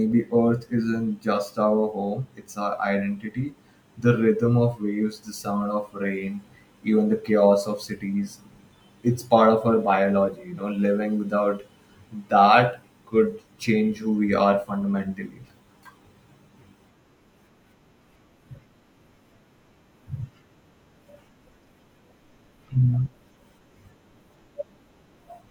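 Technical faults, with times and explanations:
8.13 s, dropped buffer (overrun): the recording side likely failed to collect a block of samples before the hardware overwrote it, so about 15 ms of speech is missing and the two edges are butted together, giving a small jump.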